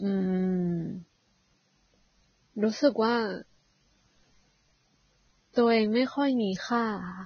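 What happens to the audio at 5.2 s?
At 5.2 s the speech sounds hissy and grainy, with smeared consonant onsets and nothing above about 6.5 kHz, as across the whole clip. The likely cause is heavy Vorbis compression at a low bitrate, near 17 kbps, which turns fine treble detail into noise.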